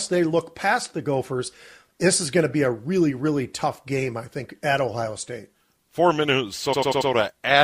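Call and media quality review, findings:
Repeated frames, 6.72–7.09 s: stutter in speech, same 92.9 ms segment replayed four extra times, adding 0.37 s. Probable component: encoder output or transport resending a compressed block, which fits a run of four codec frames being duplicated before decoding.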